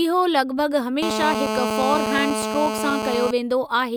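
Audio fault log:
1.03–3.31 s, GSM phone buzz: steady, raspy 217 Hz buzz rich in harmonics, about 2 dB below the speech, from rectified radio bursts; far harsher than smooth mains hum.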